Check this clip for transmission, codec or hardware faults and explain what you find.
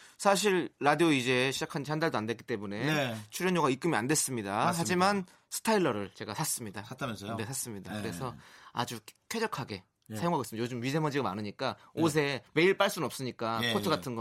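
Nothing stood out on listening to the speech in this recording.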